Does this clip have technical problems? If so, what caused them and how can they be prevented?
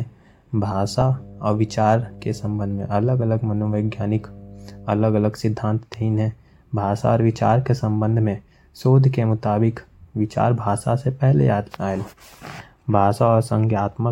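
Yes, there's mains hum under the speech from about 0.56 s to 5.12 s, a steady low 50 Hz tone sitting roughly 20 dB below the speech. That's the power line leaking into the signal, typically through a ground loop between connected gear or from a transformer close to the cable or mic. To prevent it, power everything from one outlet, keep signal runs away from power supplies, and use balanced connections or a ground-lift DI where needed.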